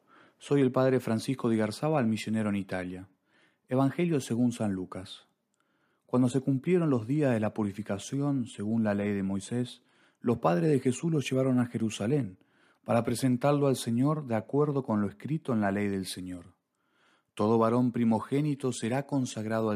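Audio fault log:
Nothing stood out as a problem on listening to this speech recording.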